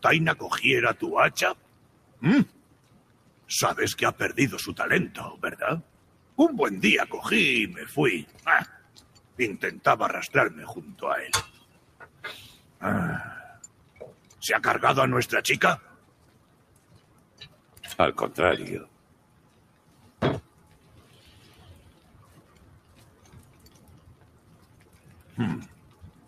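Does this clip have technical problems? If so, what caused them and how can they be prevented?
Yes. A noise suppressor applied to music or sounds is active throughout, treating steady tones, ambience and decay tails as noise, so the gain swings by roughly 20 dB and sustained material pumps and thins while attacks pass through. The fix is to switch off speech-oriented noise suppression for non-speech content.

Sound cut by the noise suppressor occurs at 1.57–3.48 s, 5.84–6.37 s, 8.82–9.36 s, 11.63–14.35 s, 15.97–17.79 s, 18.88–20.87 s, and from 21.93 s to the end. The suppressor dips held and fading passages by up to about 6 dB. Bypassing the suppressor, or using a music mode, would prevent it.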